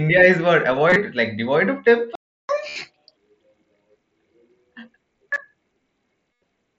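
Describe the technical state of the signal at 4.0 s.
At 4.0 s the signal is intact, carried through the Bluetooth mSBC headset path with only the light graininess that wideband link gives speech, and no fault at that moment.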